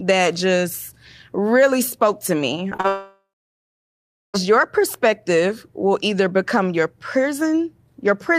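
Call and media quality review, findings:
Short concealed packet loss at 2.69–2.73 s, 2.77–2.81 s and 2.81–2.86 s, right after "really spoke to me". Brief smears and wobbles. Receiver jitter buffer missed 20 ms, 20 ms and 40 ms of audio. Decoder extended the preceding sound, then blended back.

Long network dropout from 2.88 s to 4.36 s, just after "really spoke to me". About 1.5 s of audio lost. Last sound stretched into a fading buzz or hiss, then about 1.1 s of silence. Likely a network outage. Audio resumes with the gap unrecovered.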